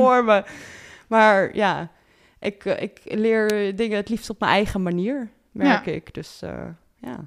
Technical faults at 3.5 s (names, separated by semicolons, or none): electrical switching spike